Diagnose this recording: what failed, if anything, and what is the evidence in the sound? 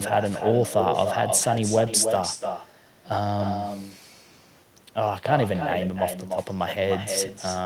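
The call processing failed: there's echo with no canceller. All through the speech, every phrase comes back roughly a third of a second later, about 6 dB down and thinner. The far end's loudspeaker is feeding its microphone, and nothing is subtracting that return path.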